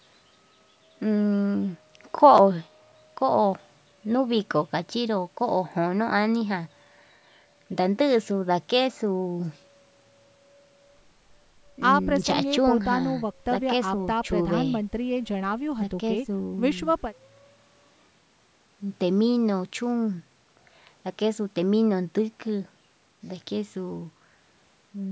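No faults found in the speech; the call microphone path's high-pass trims the lowest bass and there is nothing above 8 kHz, both as expected for that processing.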